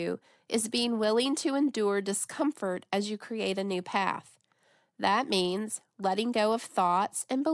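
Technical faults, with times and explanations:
Nothing technical stands out in this speech recording; there's no fault to flag at any point.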